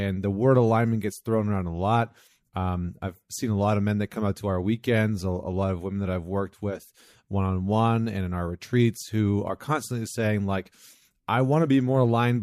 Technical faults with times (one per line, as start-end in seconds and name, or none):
0.13-12.38 clock slip clicks